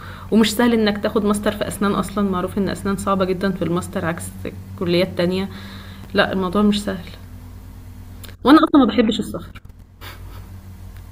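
At 6.04 s there are chunks out of order. One block of about 5.3 ms arrived two blocks late and played after the ones meant to follow it. Nothing is missing, but three hard joins land together. The speech jumbles briefly.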